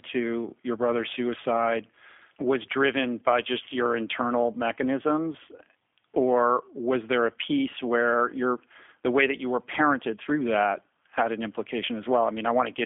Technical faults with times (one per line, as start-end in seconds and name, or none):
0.00-12.86 G.729 codec